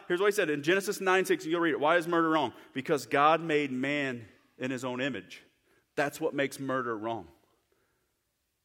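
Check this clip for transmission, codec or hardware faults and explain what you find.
No transmission, codec or hardware faults.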